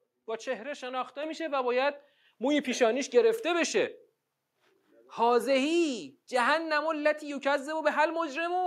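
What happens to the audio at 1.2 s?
At 1.23 s the level of the speech and the room noise behind it jumps up together by about 5 dB in a single step: a microphone volume stepped up. The call software has judged the input too quiet and raised the device's capture gain at once rather than ramping it, so everything after that instant is simply louder. On a waveform the envelope shows an abrupt step in amplitude; on a spectrogram every band, including the noise floor, brightens at the same vertical line.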